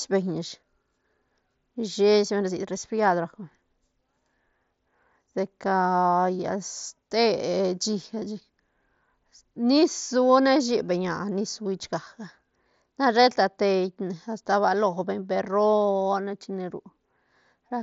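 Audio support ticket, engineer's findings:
No faults found on this speech clip.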